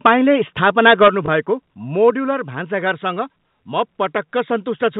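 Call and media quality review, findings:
Microphone overload, 0.05 to 0.12 s and 0.63 to 1.08 s. Harsh crackle on loudest syllables, peaks about 7 dB then about 9 dB past the converter's limit. Likely cause is mic input gain set too high, so the converter saturates. Waveform shows flat-topped peaks, a few percent of samples clipped. Spectrogram shows broadband smear over voiced energy, filling the band up to the 4 kHz ceiling of the otherwise clean G.711 A-law path.

Microphone volume stepped down at 0.07 s, 1.08 s and 2.1 s. Abrupt level drops of about 2 dB, about 6 dB and about 4 dB. Voice and background fall together. Likely cause is automatic input-gain control reacting to a too-loud or clipping mic, with the 1.08 s step landing right where the second overload ends. Waveform envelope shows a clean step with no ramp. Spectrogram shows a uniform darkening across all frequencies at each step.

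Packet loss with last packet repeated, 1.26 to 1.28 s. Small blip. One 20 ms packet lost; the receiver replays the previous one in its place. Waveform shows a duplicated 20 ms segment. Spectrogram shows a repeated harmonic pattern over the gap.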